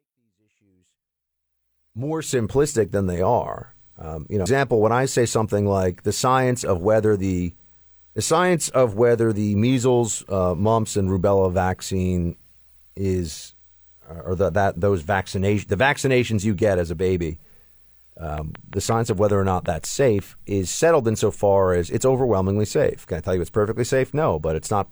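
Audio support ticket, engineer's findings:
Compressed frames skipped, 4.42 to 4.46 s: audio jumps ahead by roughly a third of a second. The jump points to several missing or rejected frames of about 46 ms each.

Train of clicks, 18.38 to 20.20 s: about ten similar pops at a regular 5.5 per second, peaking a few dB above the sound. Likely interference from nearby equipment or a faulty connection or power supply injecting pulses.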